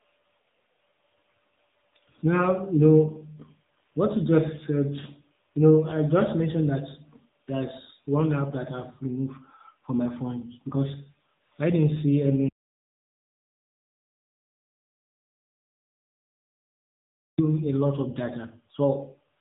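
Speech that sounds thin, boxy and plainly buzzy throughout, with nothing above 3.8 kHz, the mark of the AMR narrowband mobile codec. Its vocal-tract model is running with few bits per frame, which fits a low AMR-NB mode near 8 kbit/s, so the voice turns synthetic. At 12.49 s, right after "because I didn't see", the sound cuts to total silence with no room tone until 17.38 s, resuming at "a lot of". This 4.9 s audio dropout to silence likely comes from the input being lost while the recorder kept writing zeros.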